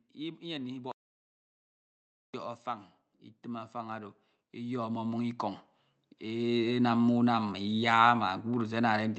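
From 2.63 to 5.45 s, automatic gain rising lifts the level about 9 dB as the gain control judges the input too quiet. Speech and background swell together, the waveform envelope widening steadily. A shorter 4 dB rise follows, 6.21–7.0 s.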